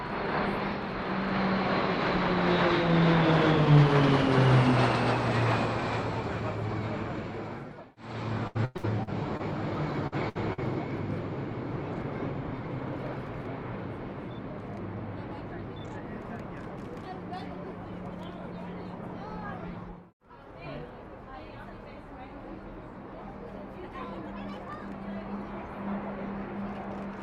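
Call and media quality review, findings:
Repeated packet loss (robotic sound), 8.47 to 9.41 s: choppy sound with pieces missing. Five gaps, longest 100 ms, about a third of the span patched by jitter buffer/concealment extending the last sound. Spectrogram shows smeared, frozen harmonic stripes repeating, with breaks between them.

Burst of packet loss at 10.07 s (about 70 ms), 10.29 s (about 80 ms) and 10.53 s (about 90 ms): receiver concealment holds the last sound as a short buzz or hiss that fades, then jumps ahead past lost audio. Waveform shows decaying envelopes with abrupt resumption; the spectrogram shows flat, fading stripes.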